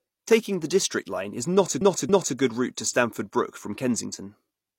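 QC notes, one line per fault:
1.77–2.33 s, repeated frames: right after "is not a" the audio stutters. A chunk of about 279 ms gets played three times in a row before things carry on into "a good route to". That points to a short run of compressed frames, likely around six, being written or sent more than once, so the decoder just replays them. Those two extra passes stretch the clip by about 557 ms.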